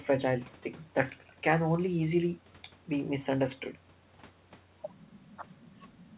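Nothing stood out on listening to this speech recording, which carries the narrow, telephone-like sound of a call path with nothing above about 4 kHz.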